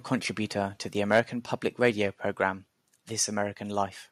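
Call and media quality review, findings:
Microphone overload, 1.13–1.20 s, after "contributor to the": peaks about 4 dB past the converter's limit, tops flattened on a small share of samples, harsh crackle; likely input gain set too high.

Microphone volume stepped down, 1.20 s and 2.31 s: sudden level drop of about 2 dB each time, the first right after the clipped peak; likely call software auto-reducing input gain.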